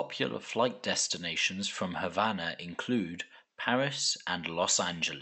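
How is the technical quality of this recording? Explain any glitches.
No glitches are audible anywhere in this speech recording.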